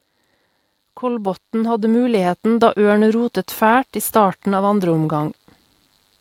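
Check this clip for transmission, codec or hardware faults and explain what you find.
There is one fault in this speech clip: automatic gain rising, from 1.00 s to 3.42 s. The gain control judged the incoming level too low and pushed its amplification up step by step, adding about 8 dB over roughly two and a half seconds. Because the whole signal passes through that gain stage, the voice and the background noise beneath it swell together, so the recording seems to creep closer and louder rather than the speaker raising their voice.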